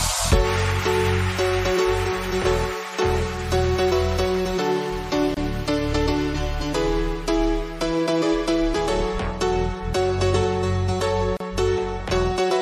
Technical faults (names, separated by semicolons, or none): gap at a join of encoded pieces